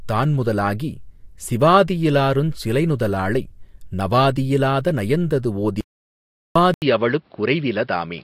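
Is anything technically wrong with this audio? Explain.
Yes, there are two problems, both near the end of the speech.

The first is an audio dropout to silence from 5.81 to 6.56 s. The sound cuts out mid-flow and about 0.75 s goes missing entirely, with no room tone in the gap. That points to the input being lost for a moment, likely through a disconnect, a failed link or a stray mute, while the recorder just kept writing silence. Whatever was said in that stretch is gone.

Then at 6.74 s, after a short silence of about 80 ms, the input switched to a poorer device and stays there until the end. From that point there's nothing above 5.5 kHz, so the speech loses its top end and sounds duller. The level stays roughly the same, but a new background noise comes in at around 40 dB below the speech. This is likely the system changing to another microphone or a headset's call profile.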